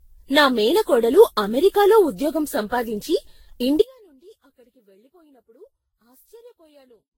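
Speech that sounds swirly, smeared and hollow from start to finish, with blurred consonant attacks and nothing above 16.7 kHz. That points to generation loss, likely from around fifteen successive lossy passes, which fits a Vorbis chain near 54 kbit/s. Each re-encode quantises on a shifted frame grid, so the damage compounds. On a spectrogram the upper bands look patchy, with scattered holes and a hard ceiling at 16.7 kHz. At 3.82 s the speech cuts out abruptly and never returns, leaving an audio dropout to a faint residue: only a trace of the signal, about 30 dB below its normal level, remains to the end. The cause is likely a break in the signal feed while the path after it stayed live. The waveform collapses from full speech to a thin sliver at that instant, and the spectrogram shows a sudden drop to a faint wash rather than a fade.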